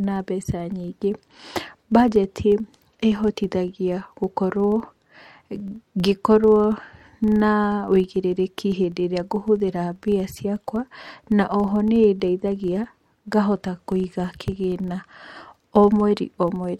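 Throughout the speech, a filter restarted on every block produces a steady buzz at about 25 Hz. The filter loses its state at each 40 ms block boundary and begins again from silence, so every block opens with a small transient whose strength tracks the signal level.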